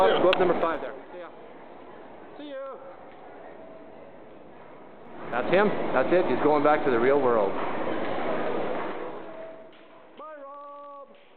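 Zipper noise occurs three times: 0.56 to 1.05 s, 4.99 to 5.50 s, and 8.64 to 9.84 s. The level moves in unsmoothed jumps, about fifty a second, with 1 dB steps in the first two. Each jump clicks, so a rapid ticking rides on the sound. The level falls about 20 dB, rises about 20 dB, then falls about 25 dB.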